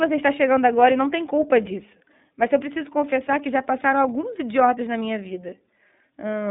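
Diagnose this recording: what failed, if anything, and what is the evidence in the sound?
Codec stage: iLBC codec throughout, nothing above 3.8 kHz, and a rough, synthetic edge from coding each 30 ms frame independently, fitting 13.33 kbps.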